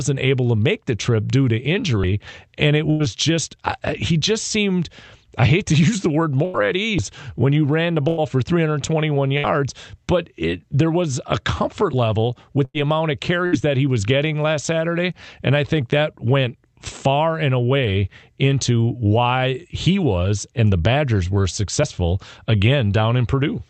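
At 2.04 s, about 50 ms of sound skips, with the sides joined seamlessly. This is likely audio missing between chunks, recurring at 6.99 s, 5 s later. From 2.90 to 3.03 s, a burst of packet loss is held and faded for 91 ms, then 60 ms of sound is gone. From 6.45 to 9.46 s, repeated packet loss causes three patched gaps, the longest 97 ms, so the sound turns choppy and robotic. From 12.15 to 12.61 s, a jitter buffer speed-up trims pitch periods, so the sound runs 6% faster at the same pitch. Further bursts of packet loss fade out at 12.65–12.77 s and 13.46–13.55 s, each losing 60 ms. From 17.62 to 17.96 s, another speed-up reaches 11% and sounds hurried.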